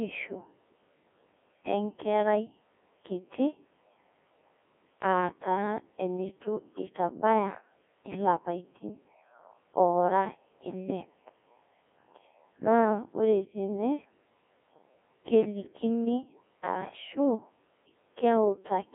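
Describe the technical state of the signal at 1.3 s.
At 1.3 s the speech is carried through a Codec 2 vocoder for the whole clip. Only pitch, voicing and envelope survive, rebuilt as sine waves, which gives a robotic buzz consistent with about 1.6 kbit/s. The spectrogram shows regular synthetic harmonics within 300 Hz to 3.4 kHz and nothing above 3.6 kHz.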